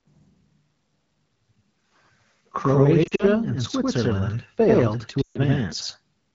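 From the start the speech is doubled, with a second copy arriving about 93 ms late at equal level, like a close slap echo. This is channel delay (doubling): one channel was held back by a long buffer, consistent with 4096 samples, before the two were summed to mono.

Between 3.04 and 3.25 s, lost AMR speech frames break up the clean AMR-WB wideband sound. Short gaps scattered over about 160 ms, the longest about 40 ms, come out as brief dips and warbling where the decoder repeats its last good settings. From 5.21 to 5.38 s a loss of about 140 ms drops the sound to near silence, and it returns weak or rough.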